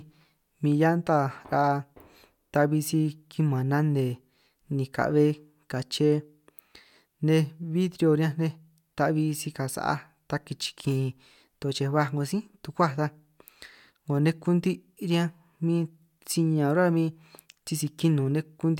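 No technical faults are audible.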